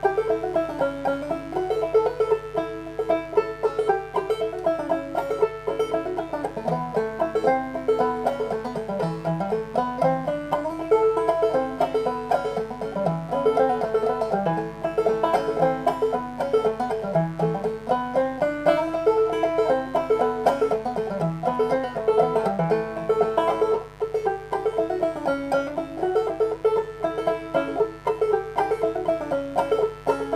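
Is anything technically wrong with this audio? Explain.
Yes. Mains buzz runs through the whole clip. It sits on the 50 Hz mains frequency, and sharp switching spikes twice per cycle spread harmonics up into several kHz. The result is a steady, raspy buzz roughly 20 dB below the wanted signal.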